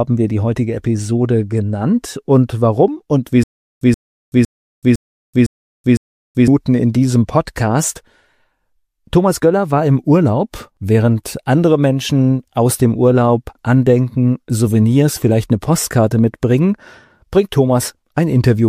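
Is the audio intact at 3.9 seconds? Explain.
No, a 128 ms burst repeats six times every 507 ms, with 379 ms of digital silence between, from 3.43 to 6.48 s: a stutter with silent gaps, likely from a stalled stream replaying its last fragment.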